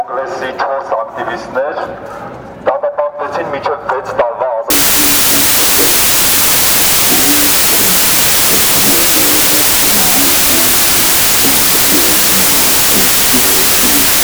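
Wrong sample width from 4.70 s to the end: audio stored as 32-bit integers is read as 16-bit, so each sample splits into two values, one carrying the real top bits and one low-order garbage. The sound sinks into loud noise, playing at half speed and an octave lower.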